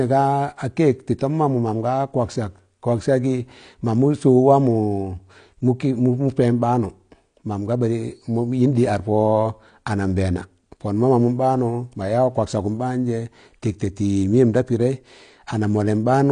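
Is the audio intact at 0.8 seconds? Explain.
No. At 0.8 s, as throughout the speech, the sound is dull and smeared, with a warbling, fizzy texture on sibilants. This is likely AAC compression. AAC-LC quantises each frame's spectrum coarsely against a hearing model, and the damage fits a low rate around 32 kbps.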